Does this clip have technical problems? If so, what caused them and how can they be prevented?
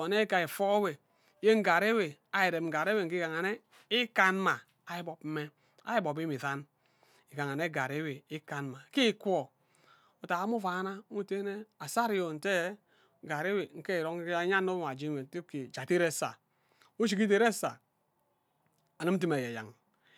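Yes. Two single sharp clicks occur, at 4.51 s and 17.65 s. Each is likely caused by dropped samples. A handful of samples vanish, so the waveform jumps abruptly to a later value. Larger buffers and a less loaded recording system prevent this.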